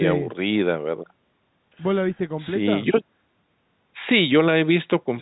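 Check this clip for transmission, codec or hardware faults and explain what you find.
No transmission, codec or hardware faults turn up in this clip.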